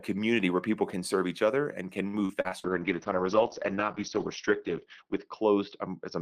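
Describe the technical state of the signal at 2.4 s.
At 2.4 s the speech is in repeated packet loss, from 2.07 to 2.80 s after "each other and can". Five gaps are patched by stretching earlier sound. It sounds choppy and robotic.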